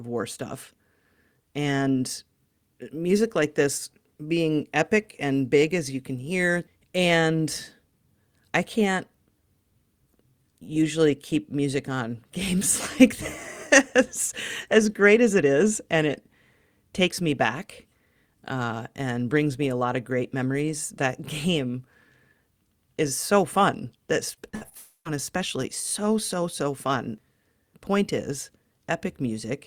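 Right after "is so fun that", from 24.35 to 24.73 s, the speech turns choppy and robotic. That's repeated packet loss: four short holes, the longest 60 ms, adding up to about 140 ms of audio gone. Each gap gets patched by stretching the last bit of sound, so over a third of that stretch is really concealment. That's what gives it the robotic, stuttering edge.

Almost immediately after, at 24.77 s, there's a longer hole lasting until 25.07 s, just before "especially so so so". This one is most likely a long network dropout. Roughly 280 ms never arrived. The receiver carried the last sound forward as a fading buzz, and the final 100 ms or so is plain silence. Then the speech picks up again with that piece simply missing.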